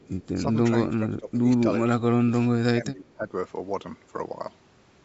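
From 0.00 to 0.27 s there is an echo leak: a very faint copy of the speech, far below the main level, trailing it by about 317 ms. This is likely a loudspeaker-to-microphone path that the far end's echo canceller failed to fully remove, so a scrap of audio returned down the line. On a spectrogram it appears as a weak ghost of the speech harmonics shifted right by about a third of a second. The waveform barely shows it.

Three passages then show speech suppressed in double talk, at 0.87 to 1.44 s, 1.97 to 2.50 s and 2.74 to 3.32 s. In each, the talker's level sinks by up to about 20 dB in the first two and about 15 dB in the third, across roughly half a second. This likely happened because the echo canceller could not tell this talker from loudspeaker echo while the other side spoke, and attenuated both. The voice audibly ducks. The waveform envelope shows clear dips or gaps, and the spectrogram shows faded bands.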